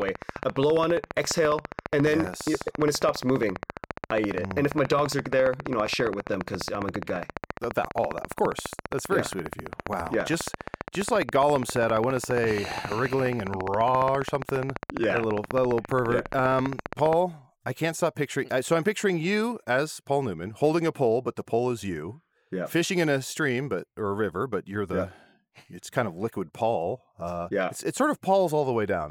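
From 0.02 to 17.14 s, a train of clicks ticks steadily, about 15 per second, right up to "I can't stop picturing". Likely interference from nearby equipment.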